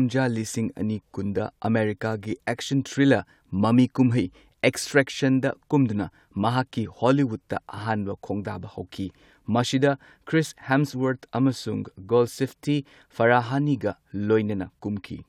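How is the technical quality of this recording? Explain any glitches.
No glitches or faults heard.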